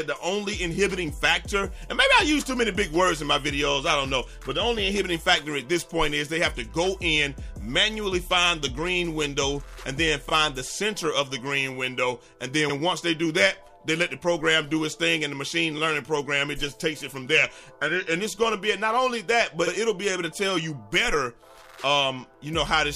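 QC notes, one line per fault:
10.28–10.31 s, repeated frames: a block of about 26.1 ms, consistent with a single compressed frame, was decoded twice, producing a brief stutter and adding 26.1 ms.
12.69–12.74 s, repeated frames: about 52.2 ms of compressed data, likely two frames, played again, giving a longer stutter and adding 52.2 ms.
15.77–15.79 s, repeated frames: a roughly 26.1 ms block, fitting one frame, was written twice, so that slice replays as a short stutter and adds 26.1 ms.
19.66–19.71 s, repeated frames: a 52.2 ms run, consistent with two frames, was sent twice, replaying that stretch as a stutter and adding 52.2 ms.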